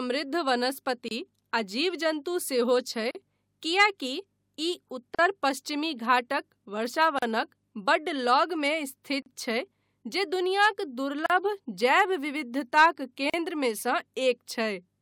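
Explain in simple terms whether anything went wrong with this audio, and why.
The speech drops out very briefly every two seconds, at 1.08, 3.11, 5.15, 7.19, 9.22, 11.26 and 13.30 s. This is a gap at a join of encoded pieces. The first gap lasts about 28 ms and comes just before "आ जीव जन्तु". The others last about 38 ms. The one at 11.26 s comes just before "जैव विविधताक", and the one at 13.30 s just after it. The recording was compressed in two-second chunks and then joined. Each chunk kept a little silent padding at its edges. So the sound briefly cuts out, then picks up where it left off.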